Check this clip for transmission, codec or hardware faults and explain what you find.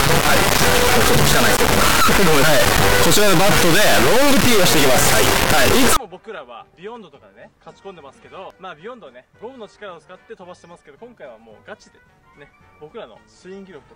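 One fault is present, in the opening stretch of the clip.

From 0.0 to 5.97 s there is an integer read as float error. The sound points to 32-bit integer samples being interpreted as 32-bit floats, so the bit patterns decode to values either near zero or far past full scale. The output slams between silence and clipping, producing a harsh, very loud square-wave buzz that cuts out in the quietest moments.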